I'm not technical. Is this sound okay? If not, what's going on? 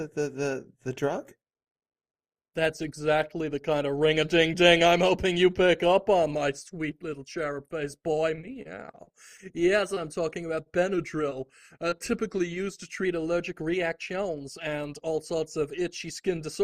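No. Two problems can be heard.

From 8.35 to 9.98 s, and again from 11.30 to 12.02 s, there is repeated packet loss, which gives a robotic sound. Pieces of audio failed to arrive, each no longer than about 28 ms, and the player covered each hole by stretching out the sound just before it. Because these patches come one after another, the sound turns choppy. The first stretch is the heavier of the two.

From 10.94 to 13.05 s, everything plays about 5.5% slower and drops almost exactly a semitone in pitch. This is likely a drift correction step, where software keeping two clocks in line changed the playback speed all at once to fix its buffer, instead of adjusting it gradually. The second burst of dropouts falls inside this slowed section.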